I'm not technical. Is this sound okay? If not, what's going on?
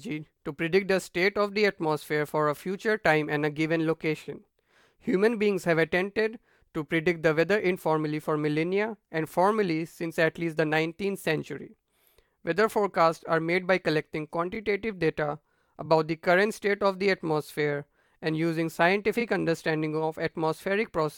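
No, not quite. It's speech with three tiny hiccups called repeated frames: at 14.54–14.56, 15.85–15.87 and 19.20–19.22 seconds. Each time, one small chunk of the compressed audio, about 23 milliseconds, was played twice in a row. You hear it as a very quick stutter or little blip, like the audio briefly tripping over itself. Each repeat makes the clip about 23 milliseconds longer, so it runs slightly long overall.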